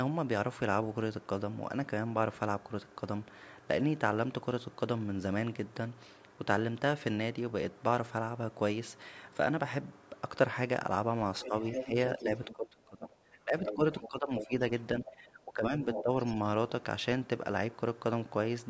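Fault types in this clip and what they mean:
Other side's voice leaking through: a second, fainter talker sits beneath the main speech in four scraps between 11.41 and 16.29 s. Most are only about 5 dB below the main speech, and the brief one at 15.06 s is much quieter. It is likely loudspeaker sound that the echo canceller failed to remove. Unlike room reverberation or a smeared copy of the main speech, this is a distinct, separate voice.
Speech suppressed in double talk: from 11.45 to 16.11 s, while that other voice overlaps, the main speech dips in pieces by as much as about 15 dB, for roughly two seconds in total. The likely cause is the echo canceller pulling everything down when both sides talk at once. It differs from network dropouts because the dips follow the overlap with the other voice rather than falling at random moments.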